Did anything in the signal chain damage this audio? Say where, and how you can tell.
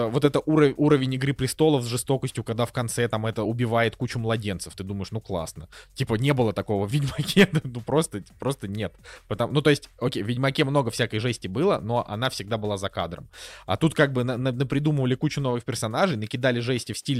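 No, nothing in the signal chain audibly damaged this speech recording, and no stage from capture through playback leaves any trace in the signal.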